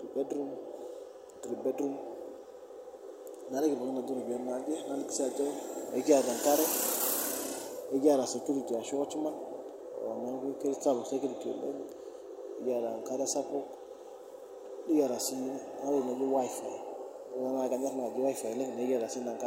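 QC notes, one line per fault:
Nothing stood out on listening to the speech in this clip.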